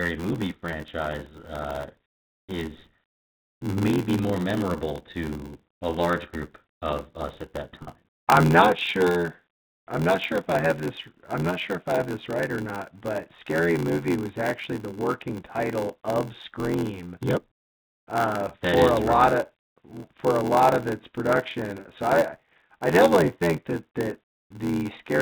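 From start to finish the speech carries a steady buzz at about 86 Hz and runs slow, at roughly 0.86 times normal speed, while its timbre stays the same. This is a block size mismatch (padded). One stage hands over shorter blocks than the next expects, which fits a 512-sample read, and each block is topped up with a brief run of zeros. A sample-rate mismatch would slow the sound and drop its pitch together. Here the timing stretches, and the buzz comes from those regularly inserted gaps.

At 7.83 to 7.87 s and again at 21.80 to 21.85 s, packet loss with pitch repetition briefly holds the sound on a slightly buzzy, sustained tone. About 40 ms of audio went missing each time. The receiver filled the hole by repeating the last pitch period and fading it out. Because the losses are short, they come across as a momentary frozen note rather than a gap of silence, which distinguishes them from a plain dropout. 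Underneath both faults sits the narrow, 4 kHz-limited band of G.711 telephone coding.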